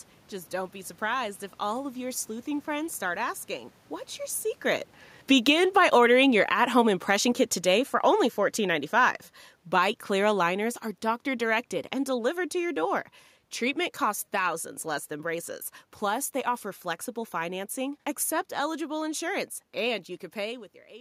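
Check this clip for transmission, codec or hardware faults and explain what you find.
One fault is present. Automatic gain falling runs from 1.04 s, after "don't be", to 16.36 s, before "offer flexible financing accept". The gain control judged the input too loud or its background noise too strong and lowered its gain gradually by about 15 dB, so the speech and the room noise sink together.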